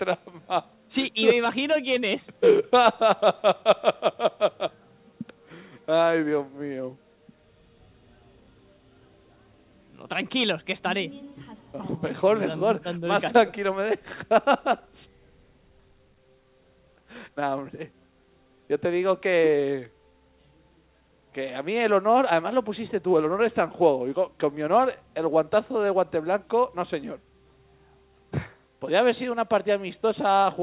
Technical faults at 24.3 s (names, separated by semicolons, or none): none